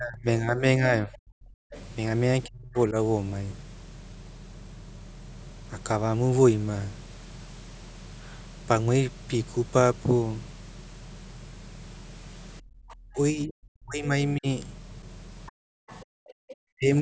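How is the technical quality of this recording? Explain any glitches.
The recording has clear, repeated echo-canceller trouble, with the talker dipping out and the far end bleeding in. The band stops at 8 kHz, which is just the call's microphone processing.

Speech suppressed in double talk shows up four times: 0.00 to 1.69 s, 2.44 to 2.95 s, 13.07 to 14.46 s, and 16.74 s to the end. The talker's level sinks, at worst by something like 30 to 40 dB, and goes patchy in pieces adding up to well under a second per stretch, around a second in the 13 s one. The likely cause is both ends talking at once, so the canceller couldn't tell the local voice from loudspeaker echo and clamped both.

The other side's voice leaking through comes in as a short scrap at 1.71 to 1.83 s and a longer run from 15.46 to 16.54 s. It sits well under the main talker, roughly 25 dB down, so it's faint but there. This is likely residual echo: the far end played out of the device's speaker, and the canceller didn't scrub all of it from the mic pickup.

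Background gated by the echo canceller happens at 12.61 to 12.85 s and 15.52 to 16.46 s. The room tone drops out abruptly, by about 31 dB and about 40 dB respectively, then snaps back. The canceller hit the microphone hard while the loudspeaker was active, and the second gate lands right on top of that leakage stretch, which fits.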